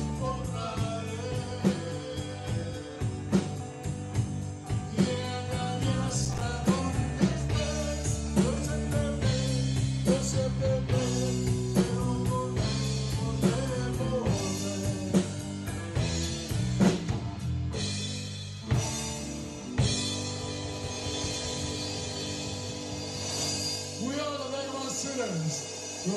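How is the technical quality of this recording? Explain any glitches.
Processor overload crackle occurs from 6.25 to 6.41 s. A handful of missed buffers of around 5 ms each leave short silent gaps with hard edges. This is the signature of a processor falling behind its deadlines, and it sounds like a brief gritty tearing that stops once the load passes.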